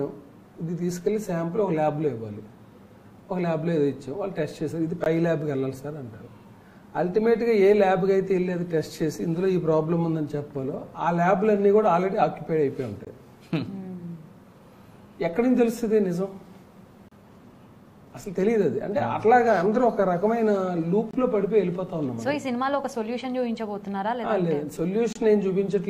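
A gap between stream segments recurs on the 4-second segment grid: mismatched timestamps leave holes the player fills with silence. Hard-edged dropouts of about 20 to 31 ms interrupt the sound at 5.04–5.06, 13.05–13.07, 17.08–17.12, 21.11–21.14 and 25.13–25.15 s.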